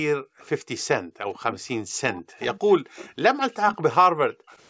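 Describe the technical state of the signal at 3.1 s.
Around 3.1 s the sound is just coming out of a stretch of deep dips and dropouts running from 1.17 to 3.09 s. Level falls by about 40 dB at worst, with roughly a second affected in total. This is speech suppressed in double talk, likely from the echo canceller turning down both its own talker and the loudspeaker echo when it couldn't tell the near talker from loudspeaker echo.

Overlapping this, from 3.01 to 3.12 s, a faint repeat trails the speech by 156 ms, about 25 dB below it. This echo leak is likely residue the loudspeaker side's canceller failed to remove from its loudspeaker pickup and sent back.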